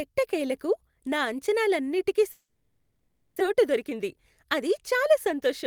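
Right after "ఎట్టకేలకు నా అంచనాలన్నింటికీ", at 2.31 s, the speech gives way to a buzzy, hissy continuation of the last sound that fades out, leaving about 40 ms of silence before the speech resumes at 3.42 s with roughly 900 ms of it simply gone. This is likely a long network dropout: the receiver stopped getting audio and spent about 1.09 s filling the gap itself. When audio returned, the playout delay had changed by around 150 ms.

From 3.51 s to 5.64 s the speech runs slightly quick, at about 103% of normal speed with its pitch unchanged. This is a jitter buffer speed-up. After the dropout, more audio was queued than the buffer aims to hold, so the receiver trimmed many short pitch-period-sized slices in succession. Together they removed around 70 ms and brought the delay back toward its target.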